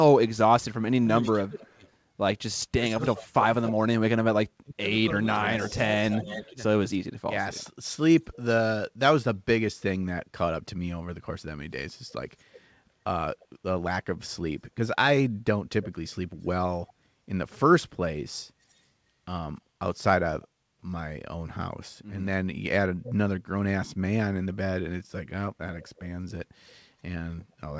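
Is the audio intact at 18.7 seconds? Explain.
No. An echo leak runs from 18.70 to 18.74 s. A very faint copy of the speech returns about 330 ms late, likely from an incompletely cancelled loudspeaker pickup.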